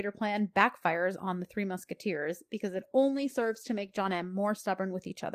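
Speech with a call bitrate drop from 2.7 to 4.51 s. The sound turns coarse and muffled as highs thin, which fits Opus falling from 32 to 16 kbps.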